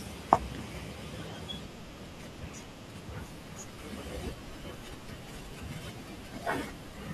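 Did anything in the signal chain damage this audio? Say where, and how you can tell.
No, nothing along the chain seems to have harmed this speech recording, and no stage leaves a mark you can hear.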